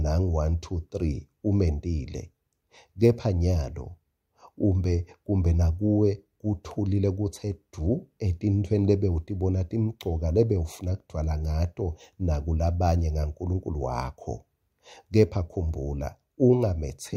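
No technical faults can be heard anywhere in the audio, and the signal stays continuous and stable throughout.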